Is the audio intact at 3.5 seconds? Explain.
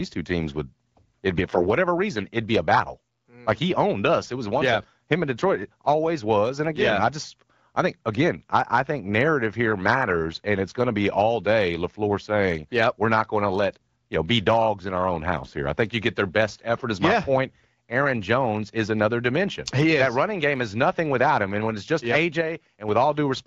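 No. A one channel drops out fault runs from 2.94 to 3.48 s, right after "reason it'd be a". The sound abruptly drops by about 6 dB, then returns, most likely because one stereo channel went silent before the mono sum.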